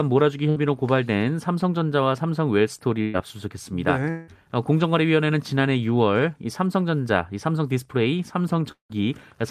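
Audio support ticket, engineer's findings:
Burst of packet loss, 0.49–0.59 s and 3.02–3.17 s. Receiver concealment fills about 60 ms, then 120 ms, by extending the last sound and fading it. Audio resumes later, with roughly the same length of speech gone each time.

Long network dropout (likely cause), 4.10–4.30 s and 8.71–8.92 s. Each gap is about 180 ms of faded concealment with 180 ms of speech lost. At 8.71 s the fill decays into about 110 ms of silence before speech resumes further on.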